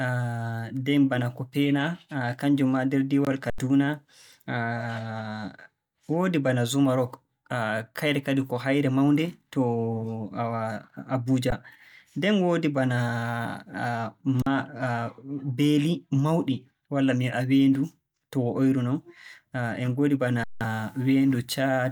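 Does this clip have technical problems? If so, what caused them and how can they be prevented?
Yes. The speech freezes flat at 3.50, 11.50, 14.42 and 20.44 s, briefly cutting it off. Each is an underrun with held sample: the buffer ran dry and the converter held its last value. A larger output buffer or higher audio-thread priority would prevent it.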